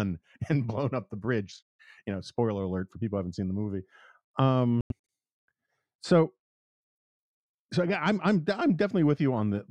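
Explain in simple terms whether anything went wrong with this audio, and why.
Brief silences at 1.77 s, after "blown up the bridge", and 4.81 to 4.92 s: likely a Bluetooth dropout, with late wireless packets discarded and playback skipping ahead.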